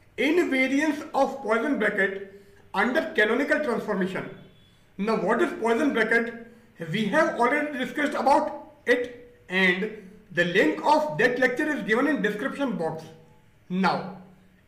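No technical faults can be heard anywhere in the audio. Nothing breaks up, drops out or distorts at any point.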